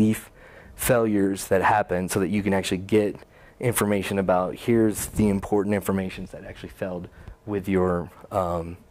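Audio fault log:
No faults heard in this audio.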